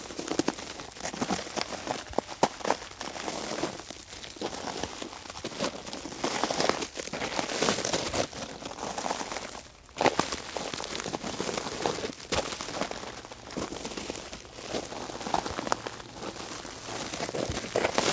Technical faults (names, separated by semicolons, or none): none